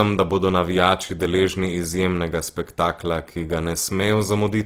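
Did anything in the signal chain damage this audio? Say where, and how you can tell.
Yes. The damage comes from the codec stage and runs through the whole speech clip. The signal shows Opus compression damage: the spectrum stays full-band up to about 20.3 kHz, with no obvious holes, but the voice sounds rough, grainy and noisy. That fits the CELT music mode, likely at a low rate around 16 kbps, where the encoder keeps each band's energy but fills starved bands by folding lower content or injecting noise.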